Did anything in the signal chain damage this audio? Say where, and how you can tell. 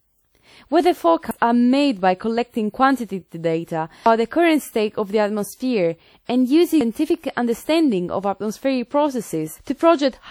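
Yes. Throughout the speech there is plainly audible ringing and washy smearing, with hiss breathing with the signal. This points to the codec stage, likely WMA compression at a bitrate around 48 kbps. Long transform blocks spread quantisation noise over tens of milliseconds, so a spectrogram shows blurred onsets even though content reaches 20.1 kHz.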